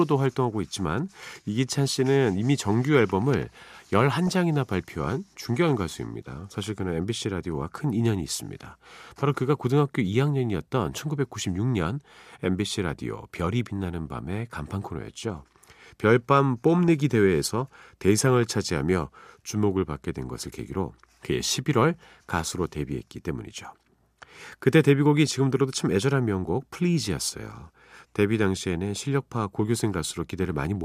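Speech, with DAB burbling at 4.27–4.32 s, 16.79–16.88 s, 23.58 s and 25.27 s: brief burbling where weak reception, around a tenth of a percent bit errors, slips past error correction and corrupts a few MP2 frames, putting short blips of noise in single sub-bands.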